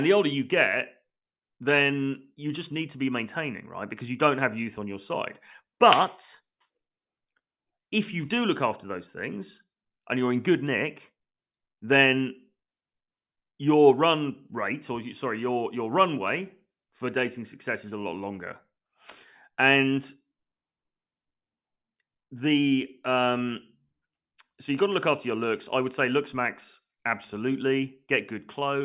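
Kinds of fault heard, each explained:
No technical fault can be heard anywhere in this speech recording.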